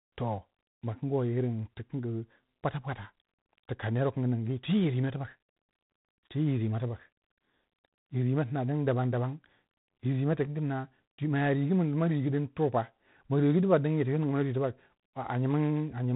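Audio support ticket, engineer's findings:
Speech, whole clip: G.726 ADPCM damage, plainly audible. Rasping hiss rides on the speech and tracks its level, unlike steady background noise. Nothing passes above 3.9 kHz. Coarse difference coding, consistent with 24 kbit/s G.726.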